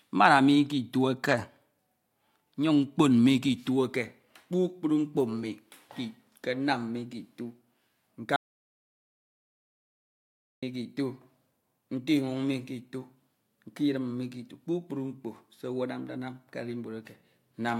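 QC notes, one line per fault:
8.36–10.63 s, audio dropout to silence: the speech cuts off mid-flow and about 2.26 s is silent, no room tone at all, likely a lost input or stray mute.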